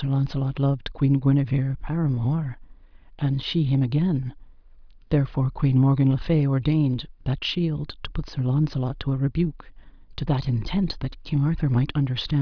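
No technical faults can be heard anywhere in the clip.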